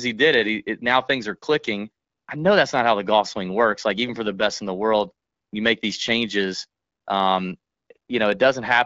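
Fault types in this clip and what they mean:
No technical faults are present, and the speech carries the band-limited character of wideband AMR coding at about the 12.65 kbit/s rate, which stays clear.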